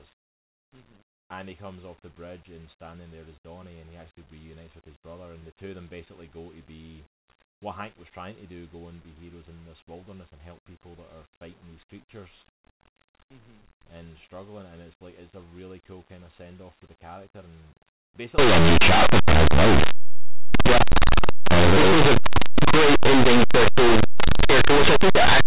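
From 18.38 s, right after "for the character and", to the end, the speech becomes very loud, harsh distortion: linear audio read as companded. Plain 8-bit samples are expanded as mu-law codes, so tiny values just one side of zero become maximum-level outputs.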